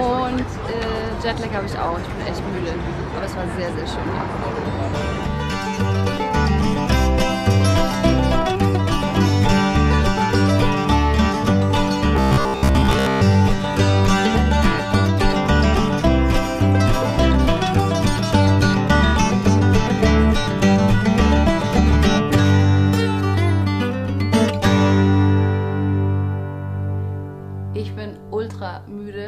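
Robotic sound from repeated short buffers runs from 12.17 to 13.21 s. Within that second the sound turns into a rigid, metallic buzz pitched at about 66.7 Hz, a fixed tone laid over whatever should be there while its rough outline still moves underneath. The likely cause is audio arriving too seldom, so playback keeps looping a block of about 15 ms, one over 66.7 Hz, and skips the real material, with most of the stretch made of these repeats.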